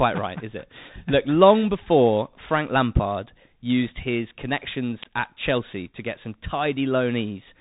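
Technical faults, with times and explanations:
Throughout: Bluetooth CVSD headset codec. The whole clip has that narrow headset sound, with nothing getting through above about 3.8 kHz, so the speech is dull and boxed in. The damage is easy to hear. There's a grainy hiss under everything, s sounds come out scratchy, and louder high bits get rough because the codec's one-bit up/down steps can't climb fast enough to follow them. That all fits a 64 kbps CVSD link.
5.03 s: electrical switching spike. Right around here there's a sharp snap, only about 7 ms long, sitting on top of the speech rather than replacing it. It has that hard, instant edge that points to a likely nearby switch, motor or static discharge arcing, with the audio line picking up the burst as a click.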